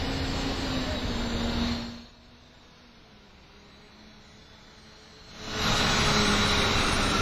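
Throughout the recording, the likely cause is heavy WMA compression at a low bitrate, consistent with roughly 24 kbps. The transform encoder works in long blocks, so its quantisation noise smears over tens of milliseconds around each sound, and weaker spectral lines are dropped to zero. Nothing survives above 15.4 kHz. The sounds ring and wash, with a hiss that breathes with them.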